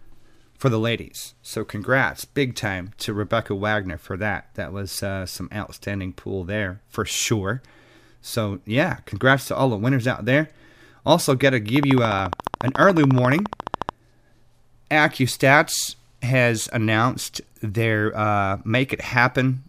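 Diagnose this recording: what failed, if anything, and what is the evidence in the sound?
A train of clicks runs from 11.76 to 13.90 s: sharp, near-identical ticks at a steady 14.1 per second, around thirty in all, standing well above the speech, something like 15 dB over it, and audible through the pauses as well as under the talking. The identical shape and even spacing of the pulses point to the analogue wiring or interface stage, most likely interference from nearby equipment coupling into the signal path or a struggling interface injecting a repeating pulse.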